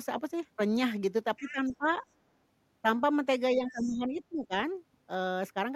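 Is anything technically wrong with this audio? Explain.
Yes. The speech has two recurring echo-control problems, each occurring twice.

From 1.36 to 1.77 s and again from 3.71 to 3.93 s, the other side's voice leaks through as a faint second voice behind the talker, roughly 20 dB down in the first case and roughly 25 dB down in the second. This is likely residual echo: the far end's voice, played on the talker's loudspeaker, reached the microphone and was not fully cancelled, so it comes through as brief, quiet scraps.

From 1.39 to 1.87 s and from 3.55 to 4.53 s, the talker's own speech is suppressed during double talk. It dips by about 15 dB at worst in the first span and about 20 dB in the second, for around a third of a second and most of a second respectively. This most likely happens because the echo canceller, faced with both sides talking at once, cannot separate the local voice from the echo and attenuates everything. 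The talker's voice therefore sinks around the times the leaked far-end voice appears.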